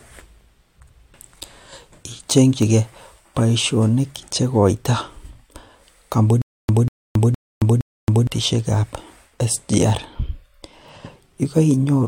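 From 6.42 s to 8.27 s the speech breaks into a stutter with silent gaps: a 191 ms fragment plays, then about 273 ms of dead silence, repeating four times on an even 464 ms cycle. The likely cause is a stalled player or stream replaying its last buffered fragment at each retry before running dry, so the speech due in that stretch is lost. On a waveform this shows as identical blocks separated by flat lines; a spectrogram shows matching vertical slices with black gaps.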